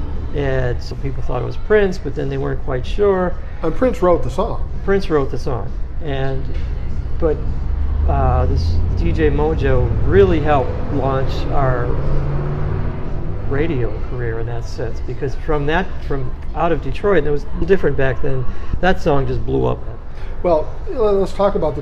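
At 0.91 s, 17.62 s and 18.74 s the audio jumps ahead, a case of compressed frames skipped. Each time a few 32 ms frames are lost, so about a tenth of a second of sound vanishes. On a waveform the envelope steps abruptly without a gap. A spectrogram shows a sudden discontinuity in the spectral tracks.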